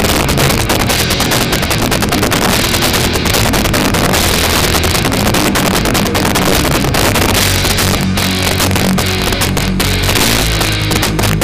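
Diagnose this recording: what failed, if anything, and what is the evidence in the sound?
Integer overflow at a fixed-point gain or sample-format conversion stage runs through the whole recording. The signal was driven about 12 dB past full scale. Instead of being limited, the excess samples, around 7 percent of them, wrapped to the opposite extreme. Each loud peak therefore flips across the entire range, producing violent, sharp cracks wherever the level rises. Clipping flattens peaks into a duller, buzzy distortion. These snaps are harsher and more explosive.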